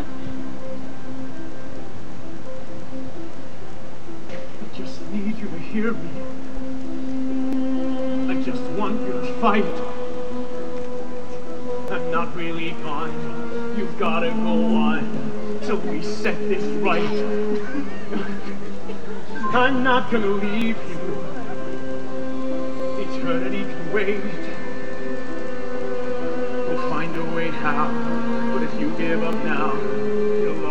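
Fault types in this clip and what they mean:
Clock drift buffer slips: a regular click every 2.18 s from 1.0 to 29.33 s, likely two clocks about 500 ppm apart slipping small sample blocks.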